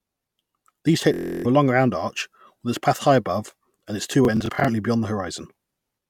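Bluetooth stutter from 1.14 to 1.46 s and again from 4.25 to 4.69 s: speech packets were lost or late, so the receiver replayed its last short slice. The first event is a solid machine-gun buzz covering about 0.3 s of missing speech. The second is scattered over 0.42 s, with brief repeats of at most 23 ms, about 0.14 s lost in total. Both times the speech resumes further on, as if it had kept playing.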